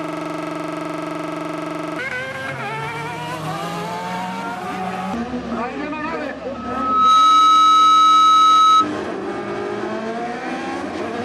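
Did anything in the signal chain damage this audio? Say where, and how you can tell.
Yes. A system hang loop, already under way at the start and lasting until 1.99 s, repeats one 42.67 ms slice 46 times at 23.4 Hz. A frozen driver let the buffer recycle, which fits a 2048-sample buffer.

A loudspeaker feedback squeal from 6.54 to 8.89 s is a single 1.3 kHz tone that builds over about half a second to roughly 15 dB above the signal. Acoustically, the microphone picked up its own loudspeaker and the loop gain exceeded one at that frequency.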